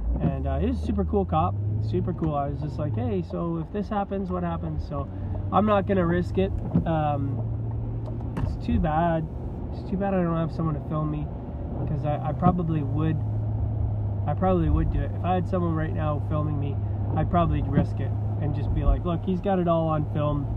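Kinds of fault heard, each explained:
Nothing faulty can be heard anywhere in this audio.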